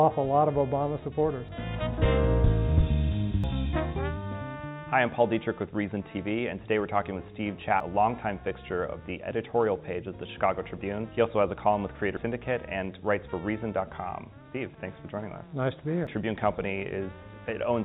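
At 1.49, 3.44, 7.80, 12.17 and 16.07 s the sound jumps forward with no gap, most likely a dropped buffer (overrun): samples were overwritten before being read, so the edges on either side are spliced together. The skips are about a tenth of a second at 1.49 and 12.17 s and about a third at the others. Unlike a dropout, no silence is heard, only a lurch ahead, through a band already limited to 4 kHz by the call path.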